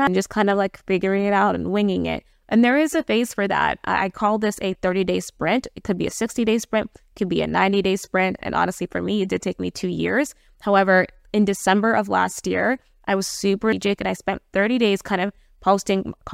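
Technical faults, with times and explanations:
0.07 s and 13.73 s, damaged data in a compressed stream: Each moment is a brief blip in the speech, too short to have any length. Bytes in the compressed stream were wrong at these two points. The decoder could not read the frame there and lost its place. It then searched for the next valid frame header to resume. The garbled or dropped frame comes out as a chirp, click or short hole instead of clean sound.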